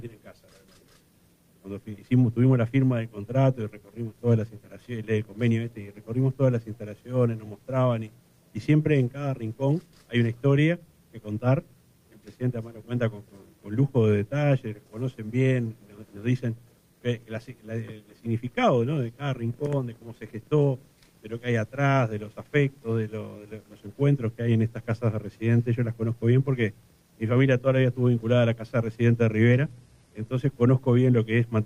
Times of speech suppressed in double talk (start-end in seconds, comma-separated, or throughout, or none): none